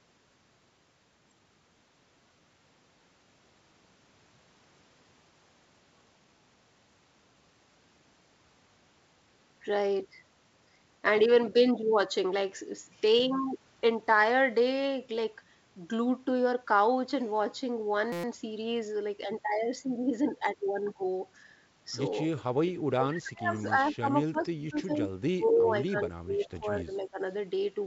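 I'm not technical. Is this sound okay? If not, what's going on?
No. Three kinds of fault occur, all in the second half of the speech.

System hang loop, 18.12 to 18.24 s: the computer briefly froze while the sound hardware replayed the same 5.8 ms snippet 20 times. The loop is so short it comes out as a brief buzz at about 172 Hz rather than a stutter. It fits a 256-sample buffer.

Speech suppressed in double talk, 22.94 to 24.09 s, 24.27 to 25.02 s and 25.35 to 27.20 s: the voice drops steeply in level. The likely cause is both ends talking at once, with the echo canceller unable to tell the talker from the loudspeaker echo and turning everything down.

Echo leak, 23.56 to 23.62 s and 24.27 to 24.31 s: short, faint scraps of the voice return about 227 ms late, the second one barely audible. The loudspeaker sound at the far end was likely not fully removed from its microphone and got sent back.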